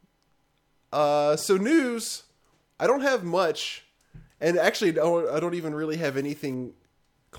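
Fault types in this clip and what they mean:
Unreliable data bit: one line of the digital sample word is marginal, so its bit flips in a random share of samples, and each wrong sample jumps by the same fixed step of about -39 dBFS. In this speech clip it sounds like a fizzing crackle from 6.04 to 6.54 s. Unlike clipping distortion, the spikes stay the same size whatever the speech level, so the fizz does not grow or fade with the signal.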